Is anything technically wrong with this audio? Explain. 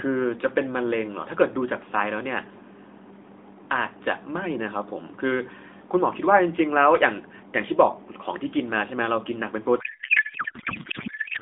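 Yes. From 9.80 s to the end, there is a codec payload misread. The AMR frames are unpacked with the wrong layout, which points to octet-aligned packing read as bandwidth-efficient. The speech turns into garbled noise and warble that barely follows it. The AMR narrowband band before this, roughly 200 Hz to 3.6 kHz, sounds lightly coded.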